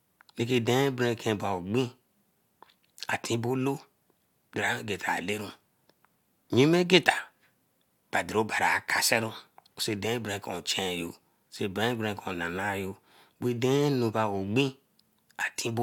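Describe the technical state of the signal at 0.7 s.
At 0.7 s the speech signal is intact, with no dropout, distortion or other fault audible at that point.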